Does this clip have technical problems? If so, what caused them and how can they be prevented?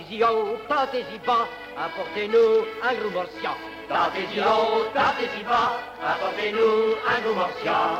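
No, there's nothing to flag here: no technical problems turn up anywhere in this clip, so there's nothing that needs preventing.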